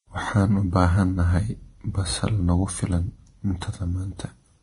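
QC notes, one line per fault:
Throughout: Vorbis compression, likely at a low bitrate around 30 kbps, has coarsely quantised the upper spectrum and removed everything above 10.6 kHz. The treble detail turns into grainy hiss of similar energy, so the speech sounds dull yet noisy, with roughened tones and smeared consonant attacks.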